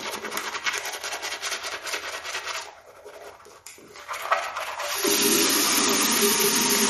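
Throughout the audio, MP3 compression was likely run short of bits, and the damage fits a bitrate near 46 kbps. Everything above 12.5 kHz is gone, and weak detail flickers in and out, leaving a plainly audible watery, swirling texture.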